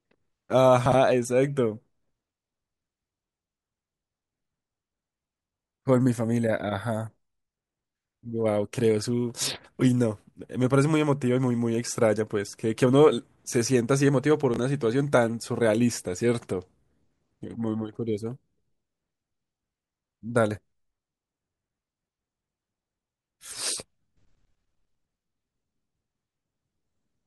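Chunks out of order disrupt this speech recording at 0.86 to 0.94 s and at 14.54 to 14.58 s. A 20 ms chunk plays three chunks late in the first case and one chunk late in the second, so each moment sounds briefly jumbled.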